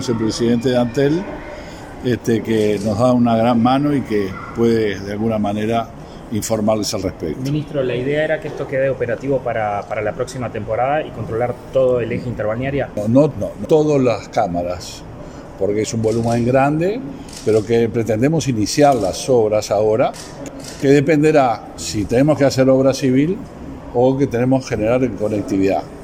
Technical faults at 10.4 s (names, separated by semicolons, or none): none